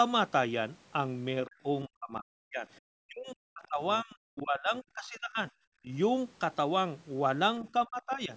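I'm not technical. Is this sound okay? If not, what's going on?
No. Speech suppressed in double talk hits the speech at 1.46–1.66, 1.85–2.68, 2.98–5.53, 5.82–5.89 and 7.86–8.31 s. When both sides likely talked at once, the call's echo canceller turned the speech down, nearly to silence early on and more mildly later. Briefly, at 3.63–3.67 s, the other side's voice leaks through as a faint scrap, likely from the loudspeaker reaching the microphone.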